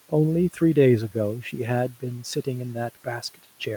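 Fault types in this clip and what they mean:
Speech cut by the noise suppressor: The suppressor took part of the speech for background noise and turned it down with the background. Between 1.88 and 2.47 s, parts of the speech dip and sound swallowed and faint. The deepest drop is about 12 dB. In total, roughly a fifth of a second of speech is pulled down. The room noise sits about 24 dB below the speech, yet the suppressor still misjudged these quieter moments.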